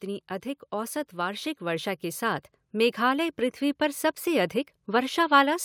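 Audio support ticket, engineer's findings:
AGC ramping up from 0.69 s to 4.1 s. Automatic gain rising: the gain control judged the input level too low and raised gain steadily, roughly 7 dB over about 3.4 s. Effect: speech and background noise swell together, no step, just a slow climb in loudness and room/noise floor across that span. Probable component: capture-side AGC in the input chain. Suggest fixed gain or slower attack/target tuning.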